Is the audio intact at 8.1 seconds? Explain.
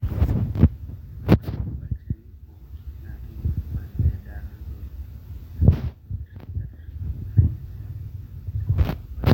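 Yes, the speech at 8.1 seconds is intact, with no dropout, click, distortion or other fault at that moment.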